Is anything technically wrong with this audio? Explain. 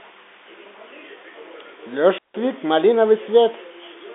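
Yes. From 2.13 to 2.38 s there is a wireless microphone squelch dropout: the radio link fades, hiss rises briefly, then the receiver mutes for about 161 ms. The waveform shows a flat gap, and the spectrogram a broadband static smear before a blank column. The speech runs through a telephone-band channel, with nothing above about 3.8 kHz.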